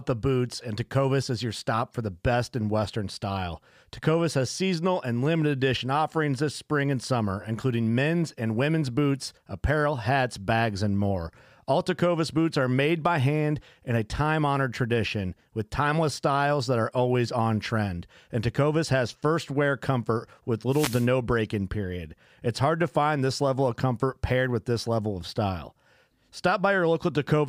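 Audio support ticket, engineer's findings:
Short burst of static swishing over the speech, 20.69–21.08 s, about 0.4 s, after "first wear comfort with", clearing before "break in period". Wireless microphone noise hit: FM radio link fading as reflections cancel, receiver noise rising over the signal.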